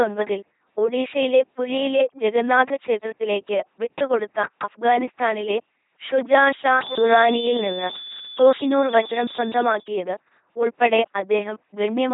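Throughout, the speech has passed through an LPC-10 vocoder, which rebuilds each moment from a short all-pole filter driven by either a pulse train or noise. The result is a heavily damaged, buzzing robotic voice, with nothing above 3.8 kHz, consistent with a 2.4 kbit/s rate.

From 6.72 to 9.89 s, a loudspeaker-to-microphone loop was likely held right at the edge of feedback, producing a feedback whistle. A thin, steady tone at 3.5 kHz sits roughly 10 dB below the speech and swells and fades slowly in level.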